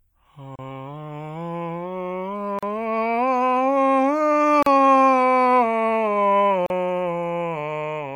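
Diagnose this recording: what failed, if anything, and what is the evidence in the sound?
The fault sits at the codec stage: gaps at the joins of encoded pieces. The music drops to silence at 0.56–0.59 s (about 32 ms), then at 2.59–2.63 s, 4.63–4.66 s and 6.66–6.70 s (about 38 ms each), recurring every 2.0 s. Each gap has edges smeared by the codec, and the music resumes where it stopped. The pieces were encoded separately and concatenated untrimmed, so each run's start-up delay and final-frame padding remain as dead air.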